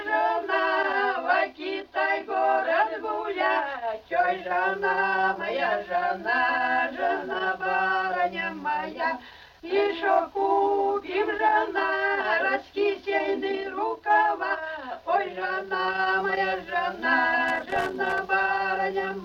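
A worn or dirty contact in the signal path is making and breaking as it shifts, producing loose connector crackle from 17.48 to 18.18 s near the end of the audio: an irregular burst of scratchy crackle where the signal is chopped.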